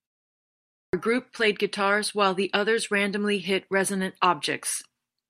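Speech, with a clipped start after a pause: after about 0.77 s of silence, the output device is still waking at 0.77 s, so the first 160 ms or so, up to 0.93 s, gets swallowed.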